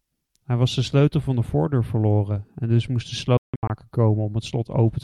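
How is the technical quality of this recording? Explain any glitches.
The recording has one clear glitch, a Bluetooth dropout from 3.37 to 3.70 s. The speech cuts to silence in several gaps totalling about 255 ms, the longest 162.5 ms, and then resumes further along as if it had played on. This is likely packets arriving at the headphones too late and being dropped. On a waveform and spectrogram, it appears as flat, empty stretches with abrupt or briefly faded edges.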